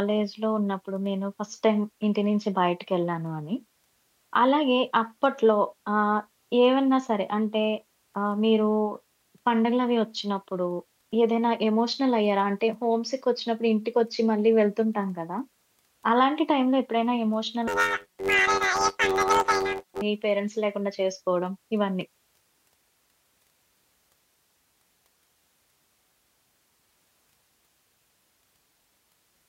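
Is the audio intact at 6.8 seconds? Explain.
Yes, at 6.8 seconds the speech plays through cleanly, with no dropout, click, distortion or other break in the audio at that point.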